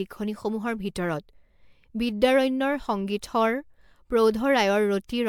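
Generation loss runs throughout this speech, likely from about ten successive MP3 passes at 128 kbit/s, each requantising on a shifted frame grid. The result is swirly, hollow and smeared, with blurred attacks and nothing above 19.9 kHz.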